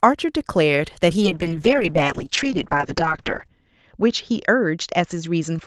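At 1.22 s a call bitrate drop begins and lasts to the end. The Opus encoder gets far fewer bits. The cut-off falls from 12 kHz to 8 kHz. The speech turns muffled and rough. The coarsest stretch lasts 2.26 s, fitting roughly 7 kbps.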